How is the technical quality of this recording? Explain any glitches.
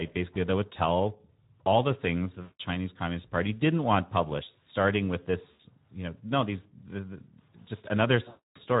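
The recording is compromised: plainly audible low-bitrate speech coding colours all of it, and three dropouts interrupt it.

Speex codec, throughout: the speech coder has too few bits to model the excitation, so it rebuilds the voice from a coarse approximation. The result is plainly audible: the speech sounds hoarse and grainy, with a noisy edge. The amount of damage fits a Speex setting around 11 kbps.

VoIP packet loss concealed by the speech codec, three times: packets went missing, and the decoder filled each gap by repeating its last pitch and filter settings while lowering the level. The first gap runs from 2.41 to 2.61 s, just after "tell all the things". The second runs from 5.51 to 5.60 s, between "want published starting with" and "you know no these". The third and longest runs from 8.28 to 8.60 s. Each gap sounds like the voice smearing into a buzzy tone or coloured noise that fades, and the speech stays weak for a moment after it resumes.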